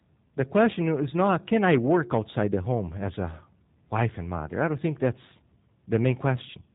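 The speech has been passed through the G.729 codec, likely the G.729A variant, and the damage fits an 8 kbit/s stream. Each frame is rebuilt from a filter model and a few pulses, so nothing above 3.8 kHz survives, and throughout the clip the voice sounds muffled, slightly rough and synthetic.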